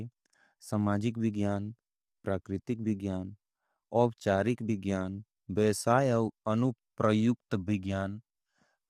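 From start to finish the speech carries plainly audible coding damage: the voice sounds rough and grainy, with a hiss-like fill between the harmonics and a top band that is dull or synthetic. This is the signature of low-delay AAC compression, likely AAC-ELD. Its short frames of about 10 ms give poor pitch resolution, and at a bitrate that points to around 32 kbps the coder cannot spend enough bits to keep the harmonics clean.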